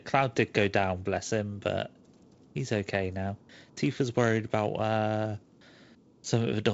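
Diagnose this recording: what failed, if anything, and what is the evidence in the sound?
Nothing failed here; no fault is audible in this speech.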